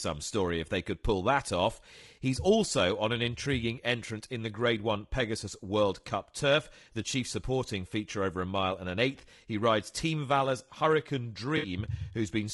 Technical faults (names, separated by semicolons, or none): low-delay AAC compression; AAC frame loss with concealment